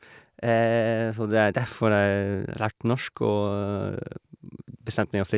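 A short speech recording with no technical faults to be heard anywhere in the signal.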